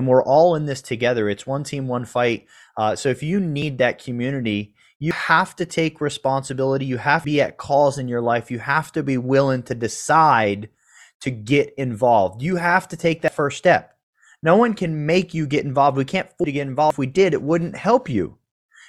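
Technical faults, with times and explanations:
3.62, 5.11, 7.25, 13.28, 16.44 and 16.90 s, dropped buffer (overrun): the speech jumps forward, losing roughly a tenth of a second at the first, second and fourth, and nearer a third of a second at the others. This is likely a capture overrun. There is no silent gap, which sets it apart from an underrun dropout.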